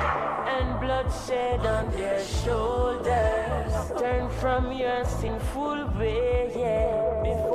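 At 5.27 s the decoder skipped compressed frames, dropping about three frames (roughly 70 ms) that fit a 26.1 ms frame length, so the sound jumps ahead with a brief smeared blip.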